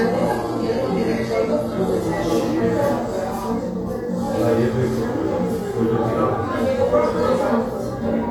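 From 0 to 2.0 s you're hearing an adaptive stream starting at a low bitrate: the treble is thin and synthetic and the artefacts are stronger, which fits an HE-AAC stream around 20 kbit/s. At 2.0 s it jumps cleanly, no gap, to something like 96 kbit/s AAC-LC, with content up to 14.9 kHz.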